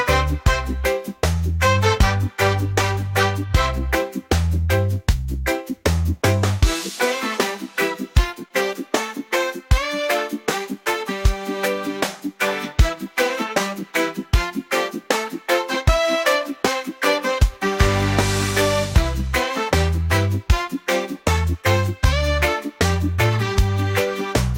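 A short concealed packet loss occurs from 8.48 to 8.51 s. About 24 ms of audio failed to reach the decoder in time. The receiver extended the preceding sound for 14 ms and left 10 ms unrecovered, producing a brief smear and dropout before the audio resumes.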